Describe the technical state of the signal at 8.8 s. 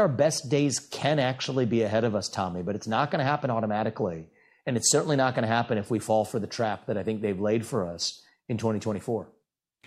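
At 8.8 s the signal is intact, with no dropout, distortion, glitch or other fault audible.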